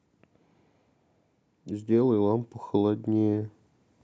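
From 1.51 to 3.5 s the automatic gain rising kicks in: the level control hears a quiet input and eases up about 4 dB, so speech and background swell together.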